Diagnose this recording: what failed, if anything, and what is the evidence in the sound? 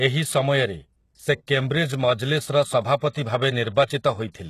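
Codec stage: the speech is likely HE-AAC compression at a low bitrate, near 16 kbps. Nothing sounds above 12.3 kHz. The copied-up treble sounds gritty.

Pre-echo, also from the codec: short hiss precedes attacks at 1.47 s, 2.97 to 3.01 s, and 3.09 to 3.15 s. Block-wide quantisation noise leaks ahead of each onset.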